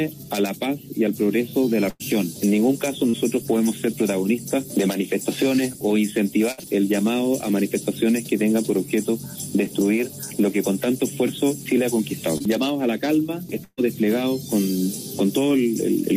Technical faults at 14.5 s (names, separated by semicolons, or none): none